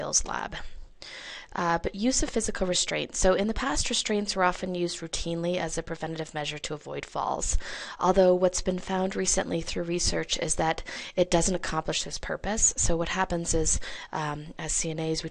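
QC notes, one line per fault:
10.94–10.96 s, Bluetooth stutter: the wireless link dropped data for about 21 ms, which fits a single lost packet. With nothing new to play, the receiver looped the last slice of audio it held, so a short fragment repeats. When data arrived again, the audio came back at the point it would have reached had it kept playing, so the missing moment is skipped rather than delayed.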